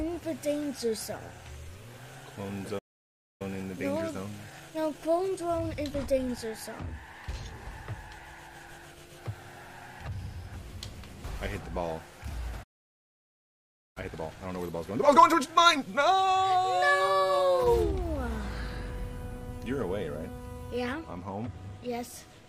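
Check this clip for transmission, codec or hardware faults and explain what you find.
Two playback faults recur, each a stall followed by hurried recovery.

Playback stall, 2.78 to 3.42 s and 12.63 to 13.97 s: the audio cuts to silence for about 0.61 s, then 1.33 s, likely from the player starving for data or its thread blocking.

Time-compressed catch-up, 3.42 to 6.42 s at 1.15x and 13.97 to 16.61 s at 1.5x: sound rushes at normal pitch, as small pieces are cut and cross-faded to clear the backlog.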